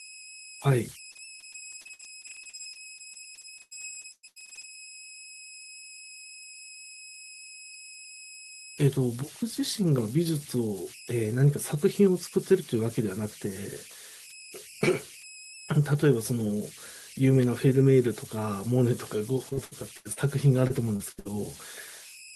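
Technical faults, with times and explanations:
Throughout, converter idle tones: an undithered delta-sigma converter settles into repeating bit patterns when the signal's small, so you get a whistle around 3 kHz in the pauses and grainy noise under quiet speech, sitting only about 19 dB below the signal.
1.11 to 4.65 s, repeated packet loss (robotic sound): about forty dropouts in a row, the longest near 116 ms, each papered over by stretching the last bit of sound. Roughly a second goes missing, and over a quarter of the stretch is patched, giving choppy speech.
19.49 to 20.19 s and 20.67 to 21.27 s, repeated packet loss (robotic sound): two shorter bursts of the same thing, with a handful of gaps each and the longest around 77 ms and 60 ms. About a third of each span is concealed, so the speech turns robotic and broken again.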